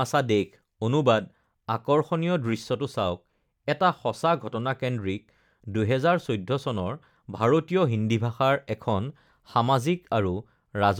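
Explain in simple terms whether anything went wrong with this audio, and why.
Nothing went wrong here: the speech runs the full 11 seconds with no sudden breaks, odd noises, or changes that would point to a technical problem.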